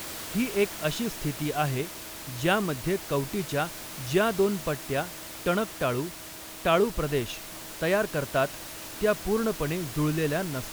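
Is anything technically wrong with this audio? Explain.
No, nothing technically wrong can be heard here.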